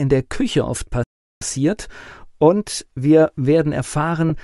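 Bluetooth LC3 compression runs throughout: the speech has a breathy, grainy edge and noise-filled highs, likely from LE Audio coding at a rate that fits about 48 kbps with 10 ms frames. A playback stall from 1.03 to 1.42 s silences the speech for about 0.38 s, likely because the player starved or blocked, before resuming. Lost LE Audio frames at 4.29 s leave a brief noisy smear where the decoder refilled one missing 10 ms frame with a reused, sign-scrambled spectrum.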